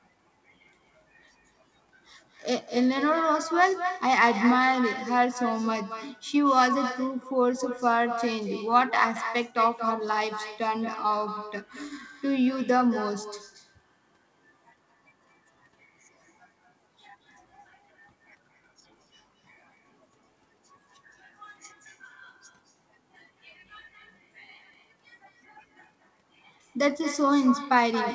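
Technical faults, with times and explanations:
Throughout, echo with no canceller: every phrase is trailed about a fifth of a second later by a thinner copy about 10 dB quieter. The far end's loudspeaker feeds its microphone, and nothing removes that before it returns across the network, under a wideband ceiling near 8 kHz.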